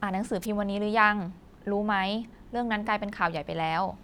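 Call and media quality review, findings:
Short swish of static, 0.41 to 0.46 s, about 50 ms. Wireless microphone noise hit on the analogue FM radio link. Reflected paths cancelled the carrier at the receiver. The signal faded, and receiver noise rose into a brief burst before the carrier recovered.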